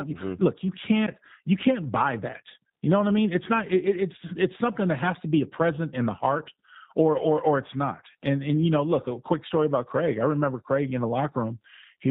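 From start to finish the speech has a plainly audible coded quality: narrowband, with nothing above 4 kHz, and a rough, synthetic texture. This is G.729 codec damage, and the sound fits an 8 kbit/s stream such as G.729A. Rather than carrying the waveform itself, the codec rebuilds each 10 ms frame from a vocal-tract filter, a pitch predictor and a few pulses per half-frame, so the fine detail of the voice is replaced by a modelled approximation.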